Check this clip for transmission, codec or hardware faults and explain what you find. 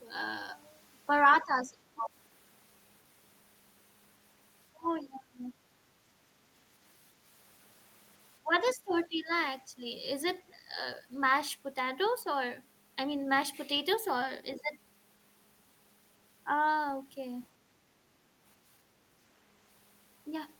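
Two related faults appear: speech suppressed in double talk, and the other side's voice leaking through.

Speech suppressed in double talk occurs at 1.43 to 2.10 s, 4.72 to 5.54 s, 8.41 to 9.31 s and briefly at 9.76 to 9.84 s. The level of the speech sinks, most deeply by roughly 20 to 25 dB, and for about half a second or more each time in the first three events. The last event is a shallow dip of only a few dB. The likely cause is an echo canceller that heard both parties at once, could not separate its own talker from the loudspeaker signal, and pulled the whole microphone feed down.

The other side's voice leaking through appears at 8.66 to 8.91 s, at roughly 20 dB below the talker, and again at 9.32 to 9.42 s, far fainter. Both fall inside or just after the third suppression, when the far-end audio was likely reaching the microphone from the device's loudspeaker and the canceller failed to subtract all of it. 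What separates this from studio crosstalk or room reverb is that it is a second, distinct voice appearing in short scraps, not a smeared tail of the talker's own sound.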